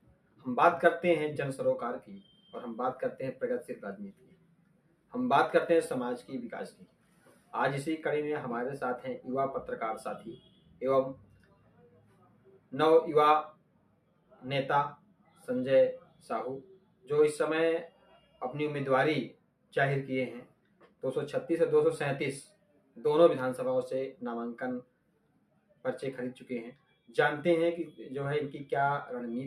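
A noise suppressor meant for speech runs on this sound throughout. It mistakes steady tones, ambience and decay for noise and pulls them down. The level swings by about 10 dB, so held sound pumps and thins while attacks pass.

Sound cut by the noise suppressor occurs at 0.01–0.46, 2.01–5.13, 6.71–7.53, 10.37–18.41, 19.33–21.03, 22.49–22.98 and 24.14–27.11 s. Here the sound sinks by as much as about 12 dB. Sustained parts and tails drop away early. The longest stretch is around 10 to 18 s.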